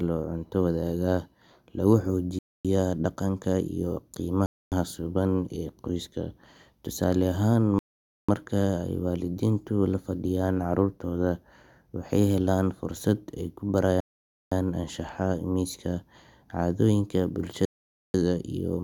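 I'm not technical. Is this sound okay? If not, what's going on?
No. Bluetooth stall at 2.39, 4.46, 7.79, 14.00 and 17.65 s: the speech goes silent for a quarter to half a second, likely because wireless interference left the headphones briefly without audio.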